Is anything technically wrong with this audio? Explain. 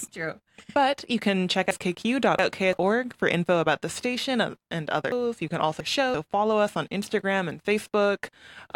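Yes, chunks out of order, twice: 1.71–2.73 s after "you can check" and 5.12–6.14 s after "station uh and other". A 341 ms chunk arrives two slots late, so the speech jumbles at the hard joins.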